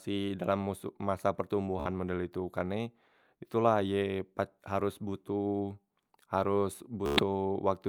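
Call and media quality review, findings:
Bluetooth stutter, 1.80–1.88 s and 7.06–7.23 s (after "botoh haros"). Receiver replayed its last short slice while link packets arrived late or missing, giving a buzzy machine-gun repeat. About 56 ms and 112 ms skipped, fitting four and eight lost 14 ms frames. Speech resumes ahead.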